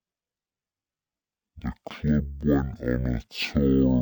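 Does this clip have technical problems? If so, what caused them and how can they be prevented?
Yes. Throughout the clip, a stereo stream was read as mono: the player treated interleaved left and right samples as one continuous channel, so each stereo frame became two consecutive mono samples. That doubles the sample count at the same playback rate, so the speech runs at half speed (0.5x) and drops a full octave (-12 semitones), sounding slow and deep. A faint mirrored copy of the sound also appears in the upper half of the spectrum. To prevent it, read the channel count from the file header and de-interleave or downmix the channels before playback.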